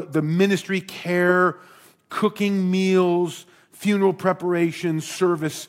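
Nothing here trips a fault; the speech just runs along without anything to flag.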